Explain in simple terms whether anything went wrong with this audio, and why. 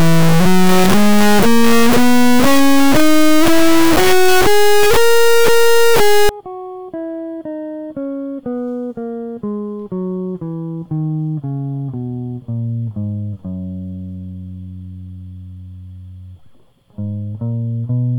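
For the first 6.29 seconds, the music is replaced by a harsh, extremely loud buzz, like a square wave slamming between silence and maximum volume, dropping out completely wherever the music turns very quiet. This is an integer read as float fault. The samples appear to have been stored as whole numbers but decoded as decimal numbers, which fits 32-bit integer data read as 32-bit float. That turns each value into either near-zero or something far past the loudest possible level.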